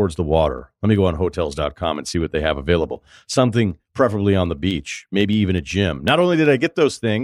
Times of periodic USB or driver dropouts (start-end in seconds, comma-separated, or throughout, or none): 0.08-7.08